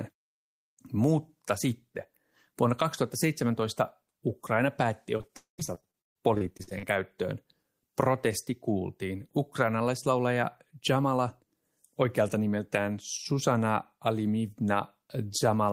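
From 5.17 s to 6.85 s the speech shows repeated packet loss (robotic sound). Short holes follow one another, the longest about 136 ms. Each is patched by stretching the preceding sound, so about a quarter of this span is synthetic fill, and the speech turns choppy.

Inside that stretch, from 5.37 s to 5.60 s, the sound smears into a fading buzz for roughly 0.2 s, then drops to silence for about 130 ms before resuming with material missing. This is likely a long network dropout, with the receiver concealing and then giving up.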